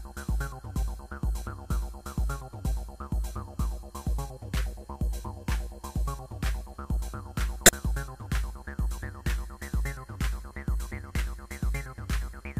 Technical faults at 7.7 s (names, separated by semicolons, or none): corrupt frame decoded